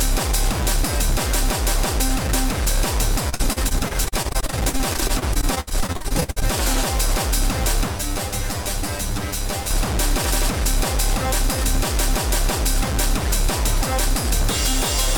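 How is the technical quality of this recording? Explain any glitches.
The recording has two clear technical faults, both in the first two thirds.

From 3.29 to 6.43 s there is repeated packet loss, with a robotic sound. Dozens of short gaps, the longest 66 ms, are each patched by extending the preceding sound, so about 30% of the stretch is concealed. It sounds choppy, with pieces missing. The waveform shows repeated, looping fragments, and the spectrogram shows smeared, stuttering blocks.

From 7.89 to 9.71 s there is channel delay, producing comb filtering. One channel lags by around 10 ms, and summing to mono cancels shared content at evenly spaced frequencies, starting near 50 Hz. It sounds hollow and phasey, and the spectrogram shows fixed horizontal notch stripes.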